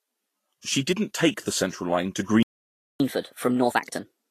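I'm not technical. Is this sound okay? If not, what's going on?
No. The speech has a hissy, grainy edge, and nothing above 14.2 kHz, most likely from Vorbis compression. That rough texture sits over every word, unlike background noise, which would hiss between words too.

At 2.43 s the sound stops dead for about 0.57 s, until 3.00 s. This playback stall likely comes from the player running short of data. It is silence in mid-flow, not a skipped section.

From 3.00 s to the end, the voice runs 1.25 times faster and noticeably higher. This catch-up at higher speed differs from a fast talker because the pitch rises with the speed.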